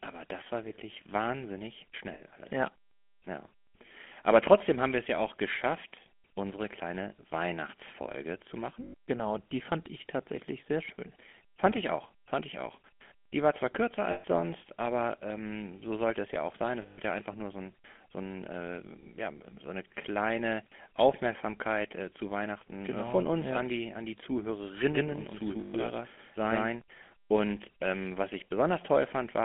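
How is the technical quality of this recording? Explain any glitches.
Quality is poor: GSM full-rate codec coding throughout, five bursts of lost GSM frames, and a doubled audio track near the end.

The GSM full-rate codec is plainly audible for the whole clip. Pulse-driven vocal-tract modelling gives a buzzy, gravelly roughness, and the band is limited to roughly 200 Hz to 3.4 kHz, which fits a 13 kbps GSM full-rate link. Ordinary narrowband telephone sound lacks this grit.

Lost GSM frames occur at:
2.14 to 2.22 s, after "das war wirklich wahnsinnig", lasting 60 ms.
8.84 to 9.09 s, after "zu machen", 180 ms scattered over 240 ms, with the longest gap about a tenth of a second.
14.12 to 14.25 s, between "war zwar kürzer" and "sonst aber ähm so", 120 ms.
16.82 to 17.00 s, 160 ms.
25.60 to 25.75 s, 140 ms.

In each, the last good frame is repeated, so the sound hangs as a metallic ring rather than dropping to a clean silent gap.

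The doubled audio track runs from 24.95 to 26.81 s. A full-band copy at equal level trails by around 150 ms, likely a second capture path or an edit. Unlike an echo or reverb, it has no decay or room colour, and it starts and stops abruptly.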